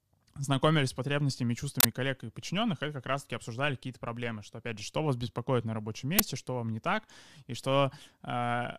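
At 1.80 to 1.85 s, right after "потребностями и", a harsh, loud burst of digital noise cuts through the speech, and a shorter one snaps in at 6.19 s after "вас беспокоит на рабочем". Both are uninitialised buffer faults: playback read a block of memory before any audio had been written to it, so leftover data came out as samples. The lengths fit a 2048-sample block and a 512-sample block.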